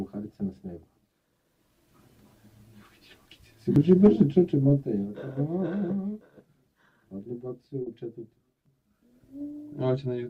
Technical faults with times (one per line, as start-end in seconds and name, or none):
3.76 audio missing between chunks
4.69 short concealed packet loss
6.21 audio missing between chunks
7.82-7.87 short concealed packet loss
8.66 audio missing between chunks
9.51 short concealed packet loss